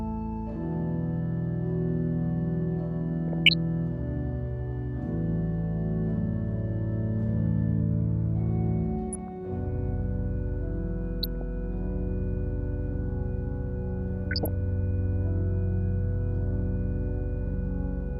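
Short bursts of DAB burbling occur at 3.28 to 3.54 s, 9.13 to 9.28 s, 11.23 to 11.42 s and 14.24 to 14.48 s. Weak reception let a small fraction of bit errors, a few per thousand, slip past error correction into the MP2 stream. Corrupted samples put short blips of noise into individual sub-bands, and corrupted scale factors make sub-bands leap in level for up to a frame. Unlike a dropout or mute, burbling does not silence the sound.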